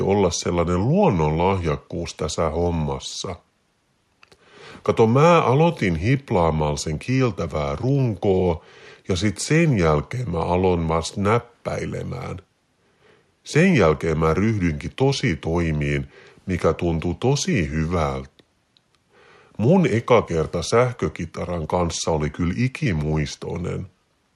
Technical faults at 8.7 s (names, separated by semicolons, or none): none